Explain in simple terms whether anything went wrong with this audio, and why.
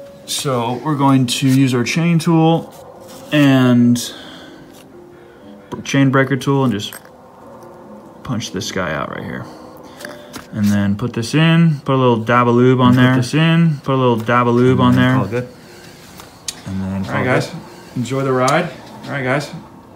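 From 12.85 s to the end, everything plays twice, with an equally loud second copy about two seconds behind. It's a doubled audio track, likely the sound captured again through a slower path.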